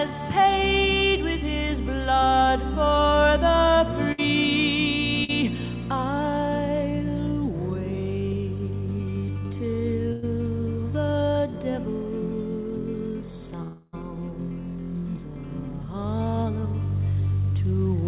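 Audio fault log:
4.12–4.20 s and 10.12–10.24 s, burst of packet loss: consecutive packets arrived too late to play, about 60 ms at 4.12 s and 100 ms at 10.12 s. The receiver stretched the last sound, giving a fading held buzz or hiss, then jumped ahead past the missing audio.
5.24–5.30 s, short concealed packet loss: about 40 ms failed to reach the decoder in time. The receiver filled it by extending the preceding sound and blending back, heard as a brief smear or wobble where a short sound can disappear.
13.62–13.95 s, long network dropout: a stretch of about 0.3 s is replaced by a continued, decaying buzz or hiss that runs the whole gap without falling to silence. This is likely a network dropout, with that section of audio never played and the sound resuming further on. Throughout, the narrow band with nothing above 4 kHz fits the G.711 mu-law call path.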